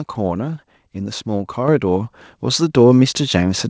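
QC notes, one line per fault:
1.68 s, microphone volume stepped up: the speech and the room noise behind it both jump louder by about 6 dB in a single instant and stay at the new level. Because everything rises together, the cause is a change in the input gain, not the talker moving closer. The call software judged the microphone too quiet and raised the device's input volume in one jump. The call path's band limit at 8 kHz is heard on both sides of the step.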